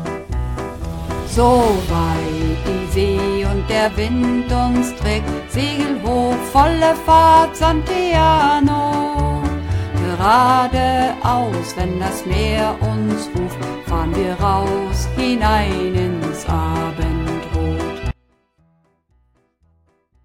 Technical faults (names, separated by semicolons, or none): audio dropout to a faint residue